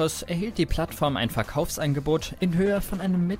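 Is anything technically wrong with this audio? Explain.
Yes. From 2.67 s to the end of the clip, the sound abruptly turns rough and watery, losing its clarity and much of its top end so it comes across muffled. This is a call bitrate drop: the encoder's target rate fell from 96 kbps to 11 kbps, so the codec had far fewer bits to describe each frame. It quantised the signal much more coarsely and, at such a low rate, narrowed the coded bandwidth, discarding high frequencies.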